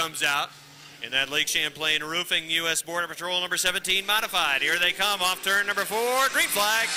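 Nothing is technically wrong with this audio, and there are no faults to place in time or trace to a cause.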